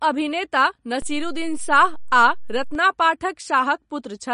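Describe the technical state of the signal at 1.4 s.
A DC step is in force at 1.4 s, within a span from 1.02 to 2.75 s. The waveform's zero line jumped to an offset at 1.02 s and stays displaced until 2.75 s. Each jump is heard as a low thump or click, while the speech carries on unchanged through it.

MP3 compression damage is also plainly audible at this moment, as it is throughout the clip. Nothing sounds above 10.6 kHz, and the coarse, watery texture fits a low bitrate around 40 kbps. Starved of bits, the encoder likely dropped the treble and let weak frequency lines flicker from frame to frame, giving swirly sibilants and smeared attacks.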